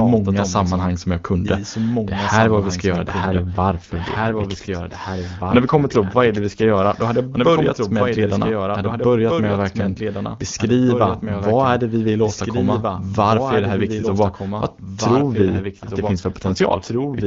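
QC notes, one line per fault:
Throughout, doubled audio track: a full-band copy of the speech trails about two seconds behind at roughly 5 dB lower, with no decay, likely from a second, slower capture path.
3.22–7.02 s and 15.21–17.25 s, AMR rate drop: after "vi ska göra det" the voice turns rough and synthetic until "hade jag börjat med", with no band loss or gap. The later drop runs to the end. Both fit the AMR-WB codec falling from 23.85 to 8.85 kbit/s on a weak radio link.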